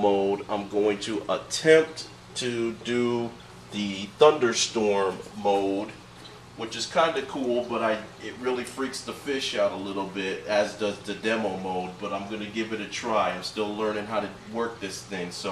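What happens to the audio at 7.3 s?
Nothing goes wrong at 7.3 s; the audio plays through that moment intact, with no dropout, click or other fault to be heard.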